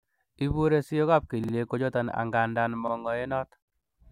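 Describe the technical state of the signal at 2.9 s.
At 2.9 s the speech stutters: a short slice of about 46 ms, from 2.88 to 2.93 s, is heard twice in a row, with a hard join where the copy begins. This is a repeated buffer. New audio arrived late, so the playback device played its last buffer one extra time. The 46 ms length fits a 2048-sample buffer. Essentially nothing was dropped, but the duplicated piece briefly holds up the flow of speech.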